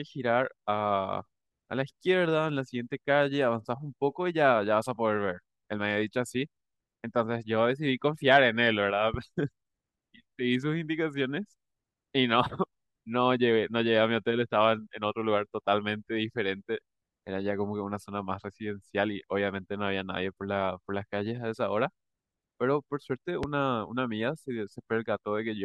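At 9.14 to 9.17 s there's a loud pop, about 10 dB over the speech, and another at 23.43 to 23.46 s, closer to 15 dB. Each is a single sharp thump sitting on top while the talking carries on, likely a voltage spike from a plug, switch or static.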